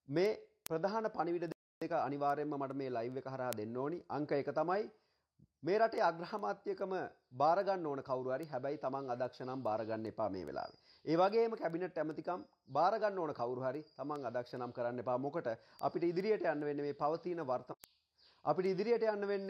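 Word clock ticks run from 0.26 s to 19.48 s: about fifty clicks at a steady rate of roughly one every 0.4 s. The receiving device is running on its own clock rather than following the sender's, so the two slowly drift apart. Each time they slip past each other, one sample is dropped or repeated and a few neighbours are misread, producing a tick. That spacing points to a clock mismatch of around 50 ppm.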